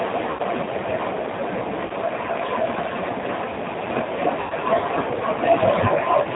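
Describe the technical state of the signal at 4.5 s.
VoIP packet loss concealed by the speech codec runs from 4.40 to 4.54 s: about 100 ms of audio went missing, which fits a burst of several consecutive lost packets. The decoder stretched its last pitch and filter state with falling gain, so the sound smears into a fading buzzy tone or coloured noise and stays weak briefly after recovery. Underneath, the G.729 codec at 8 kbit/s rebuilds speech from a filter and sparse pulses, cutting everything above 4 kHz and giving a plainly rough, synthetic edge.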